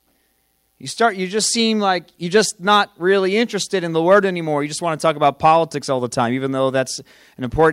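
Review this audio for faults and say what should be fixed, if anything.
No faults turn up in this audio, so nothing needs to be fixed.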